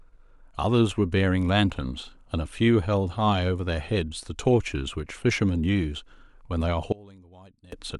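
From 6.92 to 7.72 s, the likely cause is one channel inverted: one side of the stereo pair has flipped polarity, so the shared centre content cancels when the channels are summed to mono. The speech drops by about 25 dB, leaving only a faint residue.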